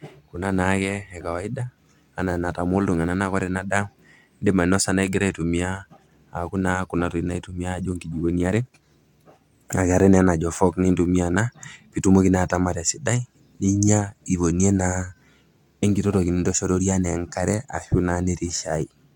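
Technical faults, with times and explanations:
Nothing stood out on listening to this speech recording.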